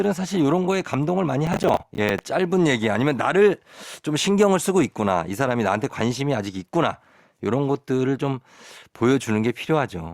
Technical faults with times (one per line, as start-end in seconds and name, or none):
1.47-2.19 processor overload crackle